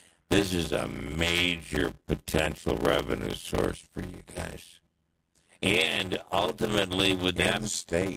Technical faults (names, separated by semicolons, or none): block size mismatch (padded); call bitrate drop